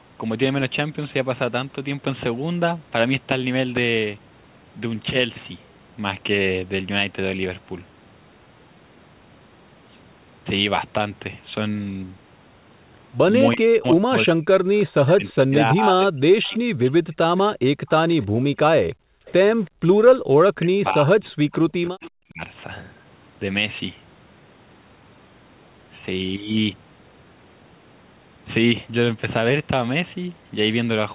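A speech recording with echo-canceller trouble concentrated between about 13.5 and 22.4 s. From 13.55 to 16.74 s and again from 20.59 to 22.41 s, the talker's speech sinks in and out by up to about 40 dB, for roughly two seconds and one and a half seconds in total. This is likely speech suppressed in double talk, with the canceller unable to separate the near talker from loudspeaker echo while both sides spoke. A faint repeat of the speech, delayed by 333 ms and about 25 to 30 dB below it, appears at 14.77–15.33 s, 16.44–18.24 s, 18.92–19.70 s and 21.53–22.09 s. That is likely echo leak: loudspeaker pickup the far-end canceller failed to remove and sent back down the 4 kHz-limited G.711 line. The room background also ducks briefly at 17.06–17.14 s by about 30 dB, then between 18.28 and 20.31 s by up to about 40 dB, for roughly 0.7 s altogether. This is background gated by the echo canceller, which clamps the microphone while the loudspeaker plays.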